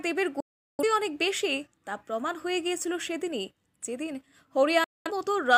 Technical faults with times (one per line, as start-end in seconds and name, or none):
0.40-0.83 digital broadcast dropout
4.84-5.11 digital broadcast dropout